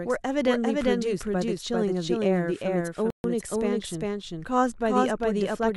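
A second, slower capture path is likely mixing this speech clip in twice, so a full-strength, dry copy trails the original by roughly 0.4 s throughout, sounding like a hard, roomless echo. The player likely ran out of data at 3.10 s, producing, on top of the doubled audio track, a playback stall: the sound cuts to silence for 138 ms and resumes at 3.24 s.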